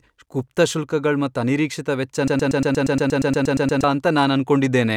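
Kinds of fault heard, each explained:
Broken-record loop: a 118 ms fragment repeats 13 times from 2.28 to 3.84 s, likely a stalled stream resending its last piece, losing the intended audio.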